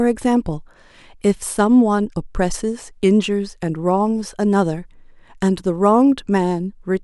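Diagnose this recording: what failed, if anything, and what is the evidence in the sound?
Nothing failed here; the speech shows no audible fault.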